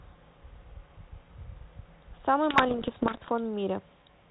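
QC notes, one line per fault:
2.50 to 3.29 s, bit errors on an ADPCM link: the speech breaks into pops and short rough bursts, and its level jumps briefly. The errors are dense, around one bit in a hundred. Each flipped bit corrupts a coded difference and also throws off the decoder's step size and predictor, so the damage rings on for several milliseconds until it readapts. The underlying telephone-band ADPCM coding, consistent with 32 kbit/s G.726, adds only light coloration.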